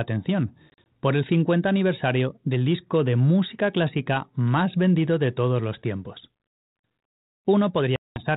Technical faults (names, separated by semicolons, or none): packet loss on an ADPCM call